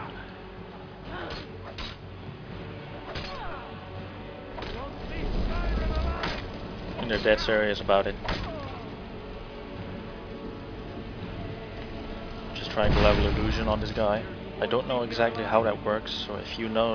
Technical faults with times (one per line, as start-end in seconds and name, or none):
none